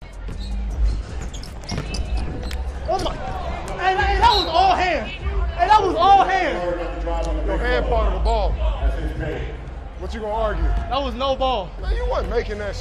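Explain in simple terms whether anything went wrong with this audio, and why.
A single sharp click at about 11.06 s. It's most likely dropped samples: a couple of audio samples, a tiny fraction of a millisecond, went missing, so the sound jumps abruptly instead of flowing smoothly. The gap is far too short to remove any audible sound.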